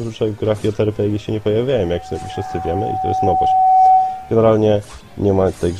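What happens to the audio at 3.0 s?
At 3.0 s the audio is in the middle of a loudspeaker feedback squeal that runs from 1.71 to 4.40 s. A microphone is picking up the loudspeaker it drives, and at 751 Hz the loop gain tops unity, so that tone feeds on itself. It swells over roughly two seconds into a steady squeal sitting around 10 dB above the rest of the sound, then ends.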